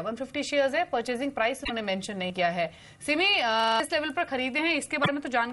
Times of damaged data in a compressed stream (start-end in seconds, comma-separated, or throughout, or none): 1.61-1.70, 5.00-5.09